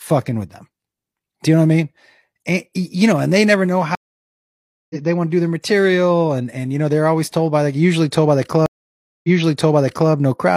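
At 3.95 s, after "and they never know", a stream reconnect leaves a 0.95 s flat gap, then the sound resumes about a second later at "they want to do". At 8.66 s, after "told by like usually", a second reconnect leaves 0.58 s of silence and restarts 0.88 s earlier, repeating audio. Each shows as a blank spectrogram column.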